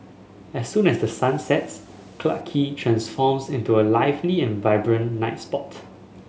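From 0.75 to 2.41 s the speech was likely requantized to a short word length by plain rounding with no dither, so the rounding error tracks the waveform instead of forming a steady hiss. The result is low bit depth without dither: a grainy, signal-following distortion roughly 35 dB below the speech, consistent with an 8-bit word length. The grit thickens on softer syllables and decays, and the quietest moments sputter between adjacent steps or drop to silence.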